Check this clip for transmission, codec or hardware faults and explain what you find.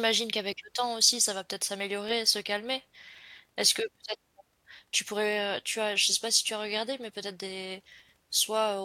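Clock drift buffer slips are present, running from 1.08 s, just after "qu'avec le temps", to 8.10 s. A short click lands about once every 1.0 s through the speech, roughly seven in all. The likely cause is two devices running on separate clocks that disagree by roughly 200 parts per million. The buffer between them slowly fills or drains until a few samples are dropped or repeated, and each of those small discontinuities is heard as a regular tick.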